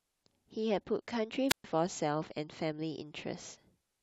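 At 1.48 s a wireless microphone squelch dropout begins: the analogue FM link loses signal strength, hiss briefly rises, then the receiver's squelch mutes the output for about 126 ms, leaving a near-silent hole before the speech returns at 1.64 s.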